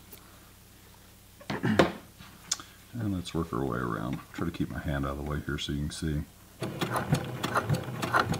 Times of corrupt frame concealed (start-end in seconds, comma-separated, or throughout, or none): none